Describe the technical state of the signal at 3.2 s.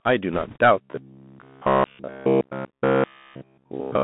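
At 3.2 s the speech is inside a stretch of robotic sound from repeated short buffers, running from 0.81 s to the end of the clip. The likely cause is audio arriving too slowly, with playback filling each gap by looping a fragment of about 15 ms while fresh audio is skipped. Since essentially all of this stretch is repeats, the loop rate imposes a rigid, metallic buzz near 66.9 Hz that only loosely tracks the speech.

The same moment also carries the Bluetooth CVSD headset codec, present throughout. The line is confined to roughly 150 Hz to 3.6 kHz, so everything above that is gone and the speech sounds thin and boxed in. The single-bit, adaptive-step coding, which fits a 64 kbps headset link, is plainly audible. Loud bright sounds overrun the step size and distort, sibilants turn scratchy, and a granular hiss sits beneath the buzzing speech.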